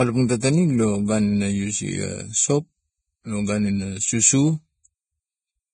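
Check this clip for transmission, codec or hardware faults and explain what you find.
One codec fault runs through the whole speech clip. Vorbis compression, from start to end: the speech is likely Vorbis-encoded at a low setting, consistent with a bitrate around 20 kbps. The encoder keeps a smooth spectral envelope but quantises the fine detail above it so coarsely that much of it becomes noise of similar energy, and it discards everything above about 9.7 kHz. The result is dull, hissy and grainy treble, roughened tones and smeared consonant onsets.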